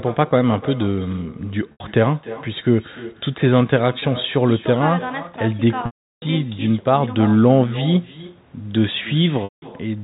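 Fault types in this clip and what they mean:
Echo with no canceller: the far end's loudspeaker is feeding its microphone and nothing removes it, so this speech returns after the network round trip, roughly 300 ms late, as a thinner copy about 17 dB below the original throughout the clip.
Packet loss with pitch repetition: lost stretches are bridged by repeating the last pitch period and fading it out. The 20 ms gap at 4.0 s is a brief buzzy hold. The 80, 180 and 360 ms gaps at 1.72, 9.44 and 5.86 s fade toward silence before the speech cross-fades back.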